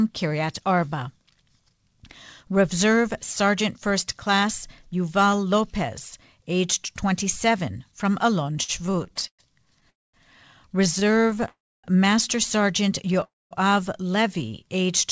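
From 8.44 to 9.86 s there are repeated stalls (stutter): packets arrived late, the jitter buffer kept running dry, and the receiver stretched the last sound across 15 short gaps, the longest 114 ms. Roughly a fifth of that span is filled-in sound, so the speech drags and judders without losing anything.

A call audio freeze follows at 9.90 to 10.15 s. The sound holds briefly, then drops to about 220 ms of silence before resuming where it stopped, adding about a quarter second of delay. A second stutter run at 10.99 to 11.48 s is milder, with 7 gaps of at most 21 ms. It leads straight into a longer freeze at 11.48 to 11.86 s with about 280 ms of silence. A third freeze at 13.24 to 13.53 s has about 210 ms of silence. In each freeze, the likely cause is packets held up in transit, leaving the receiver nothing to play until they arrived.

From 14.21 to 14.86 s comes a jitter buffer slow-down. 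The receiver rebuilt its reserve by repeating single pitch periods, adding 71 ms, so the speech runs at about 90% speed with unchanged pitch and drawn-out sounds. Across the clip the call path is band-limited, with nothing above 8 kHz, which fits a wideband call codec such as G.722.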